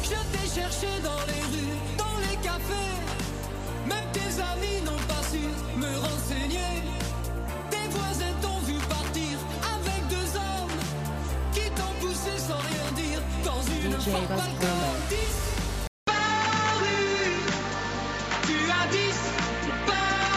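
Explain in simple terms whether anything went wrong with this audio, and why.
Something does go wrong near the end: at about 15.87 s the sound drops out for a fifth of a second, then comes back duller, with nothing above roughly 7.6 kHz and a faint new background hiss. That's likely an input switched to a poorer device, with the recording jumping to a weaker microphone.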